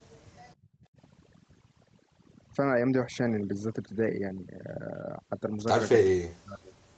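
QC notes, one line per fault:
throughout: overdone noise removal. Bands near the noise estimate are cut hard, so the background drops and breaks up into twinkling specks.
0.00–0.93 s: background gated by the echo canceller. The canceller pulls the microphone down by up to about 21 dB while the loudspeaker plays, so the room sound drops out briefly.
5.98–6.77 s: speech suppressed in double talk. The speech dips, thins or breaks into pieces, by roughly 40 dB at worst, likely the echo canceller clamping down while both sides talk at once.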